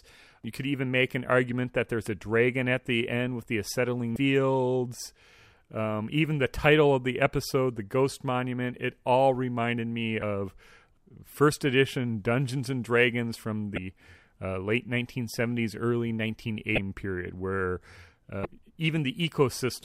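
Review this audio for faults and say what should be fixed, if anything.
Damaged data in the compressed stream causes short blips in the speech at 4.13–4.16, 10.19–10.22, 13.74–13.78, 16.75–16.78 and 18.42–18.45 s, each about 34 ms long. Corrupted bytes make the decoder misread frames and then resynchronise at the next valid header. Re-fetch the file from an intact source and verify transfers with checksums.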